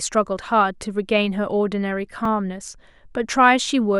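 At 2.25 s the speech has a repeated buffer. New audio missed its deadline, so the device replayed the last 1.33 ms block once, which fits a 64-sample buffer. With a block this short, the hard join sounds as a single brief click, with essentially no audio lost.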